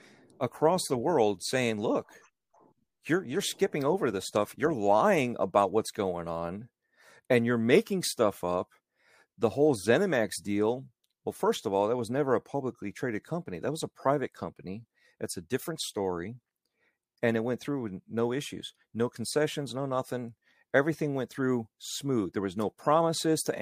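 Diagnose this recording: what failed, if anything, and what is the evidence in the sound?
The sample-rate conversion in the buffer stage failed: the resampler restarted on every block. A 100 Hz buzz rides on the speech throughout and stops in pauses. Each 10 ms block was converted from 44.1 kHz to 48 kHz alone, so every edge carries an error.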